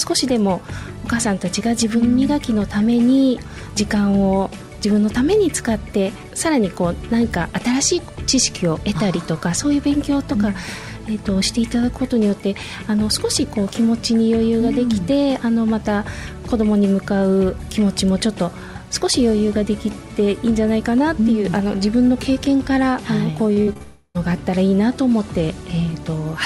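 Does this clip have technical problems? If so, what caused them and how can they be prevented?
Yes. Repeated packet loss (robotic sound) runs from 23.53 to 23.82 s. Four separate gaps open in that span, the longest lasting 53 ms. Each is patched by stretching the preceding sound forward, so nearly half of the stretch is synthetic fill and about 120 ms of real audio is gone. That gives a choppy texture. A jitter buffer with more headroom, forward error correction, or a steadier connection would prevent it.

A long network dropout follows at once, from 23.82 to 24.17 s. The sound fades into a prolonged smeared continuation of the last moment and then a brief silence of about 20 ms before the audio resumes. Roughly 320 ms of the original is lost. The likely cause is the connection stalling entirely, so nothing arrived and the receiver could only extend what it already had. A more reliable link or redundant transmission paths would prevent it.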